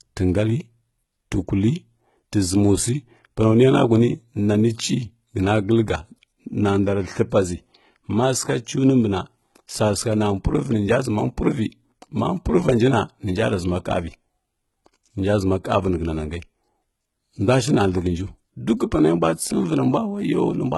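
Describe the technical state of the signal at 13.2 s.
At 13.2 s, as across the whole clip, the treble sounds rebuilt rather than recorded, likely HE-AAC compression at a very low bitrate near 16 kbps. Above the coded band, upper frequencies are copied from lower ones, so sibilants turn gritty and metallic, with nothing above 11.8 kHz. A plain low-pass would sound dull instead.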